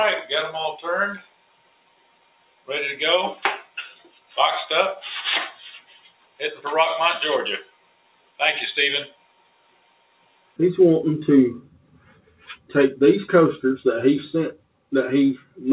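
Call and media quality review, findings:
Noise suppressor applied to music or sounds, whole clip: speech-tuned suppressor on non-speech audio. Sustained tones, ambience and reverb are treated as noise, causing pumping gain swings of around 20 dB while attacks pass. Unlike a compressor or AGC, gain follows steadiness, not loudness.

Sound cut by the noise suppressor, eight dips: 1.18–2.69, 3.6–4.37, 5.5–6.65, 7.62–8.4, 9.06–10.59, 11.65–12.7, 14.56–14.92, 15.38–15.58 s. Held and decaying parts sink by about 16 dB (about 13–14 dB at 11.65 and 15.38 s). Onsets survive, unlike packet-loss dropouts, which take transients too. The G.711 mu-law path's dull top end stopping at 4 kHz is expected band-limiting.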